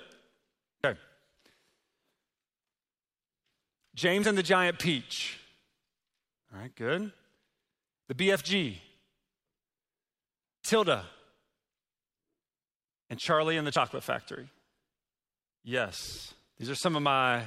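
At 0.84 s and again at 13.76 s the sound jumps forward, skipping roughly 40 ms with no gap. The likely cause is a dropped buffer (overrun), where unread samples were overwritten. The waveform shows an abrupt discontinuity, and the spectrogram a thin vertical broadband line.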